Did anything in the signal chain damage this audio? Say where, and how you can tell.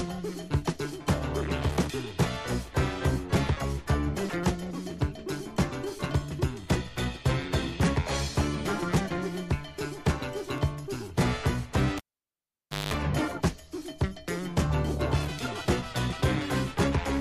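Yes. The damage is in the analogue wiring: a cable pulled and plugged in between 11.98 and 12.94 s. A pop opens the fault, then the sound drops to near silence for about 0.91 s while the live connection is broken. As the plug goes back, only the tip makes contact at first, leaving the input ungrounded, so a 0.2 s burst of 50 Hz mains buzz comes through before a second pop restores the audio. On a waveform, two sharp spikes bracket a flat gap with a short dense buzzy block near its end. A spectrogram shows broadband vertical stripes at each pop and stacked horizontal lines at 50 Hz harmonics during the buzz.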